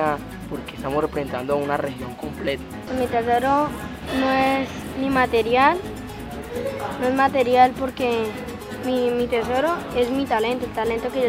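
Nothing here trips up the ear, with no dropouts, glitches or distortion turning up anywhere along the way.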